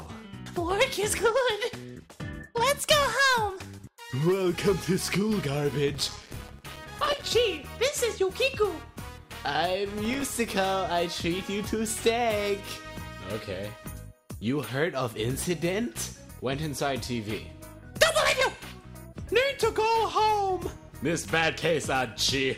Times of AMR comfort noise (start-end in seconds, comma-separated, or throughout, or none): none